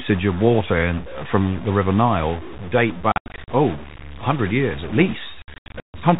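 Across the whole recording the speech carries a distortion, and the pauses between phrases are filled with a steady noise floor rather than falling quiet. That combination points to a stuck bit, likely one data line held at 0 or 1 in a converter or interface. Roughly half the sample values then land off by that bit's weight, in a pattern that follows the waveform. Because the bit also flips with the sign of small values, even near-silent passages turn into noise.

Between 3.12 and 3.48 s the speech is chopped by packet loss filled with silence. About 220 ms is missing, scattered over 360 ms, with the longest gap around 80 ms. Each hole starts and ends abruptly. A second burst runs from 5.42 to 5.94 s, just after "years at". There about 340 ms drops out across 520 ms, with one gap near 140 ms. The gap lengths fit 20 ms packets. Throughout, the audio is limited to the 4 kHz telephone band of G.711 coding.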